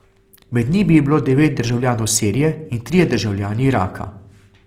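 A speech clip with plainly audible coding damage throughout, likely from Opus compression in its CELT music mode at a rate that sounds near 24 kbps. Unlike MP3's swirling spectral holes, bands stay filled, so the audio turns grainy and rough while keeping full bandwidth.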